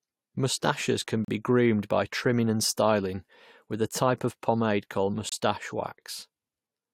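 It's a speech clip with two gaps between stream segments: hard-edged silences at 1.25–1.28 s just before "be groomed by trimming" and 5.29–5.32 s after "type of pomade called". Segment timestamps don't quite meet every 4 s, so the player pads roughly 36 and 27 ms of silence without losing audio.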